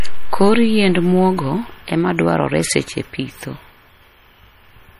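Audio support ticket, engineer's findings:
Sample clock jitter, throughout. Hiss/roughness riding on the speech, rising on loud and bright sounds, absent in pauses. Unstable converter clock, roughly 2 µs rms timing error. Error tracks waveform slope, around 40 dB below signal.

MP3 compression, likely cause, throughout. Plainly audible watery, swirly texture, smeared attacks, nothing above 15.2 kHz. Encoder dropping weak spectral lines frame to frame, treble cut. Damage level fits a low bitrate near 40 kbps.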